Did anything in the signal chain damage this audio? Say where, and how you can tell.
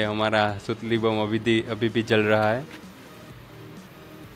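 No, there is no sign of damage from any stage of the signal chain, and the signal holds together without audible disruption anywhere along its length.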